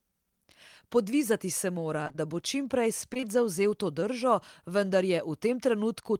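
From 2.03 to 2.20 s, between "se mora" and "da bo čim prej", repeated packet loss (robotic sound) leaves several holes up to 23 ms, about half the stretch patched, giving choppy sound. From 3.14 to 3.26 s, before "zavzel to", short concealed packet loss recurs as isolated 20 ms holes at 3.14, 3.17 and 3.21 s. These are brief smears that add slightly to the length, not a sustained robotic run.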